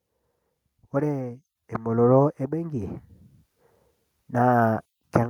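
From 0.71 s to 3.06 s, automatic gain rising lifts the level by about 8 dB as the gain control, judging the input too quiet, turns itself up. Speech and background noise swell together over those 2.35 s, seen as a steadily widening waveform envelope and brightening spectrogram.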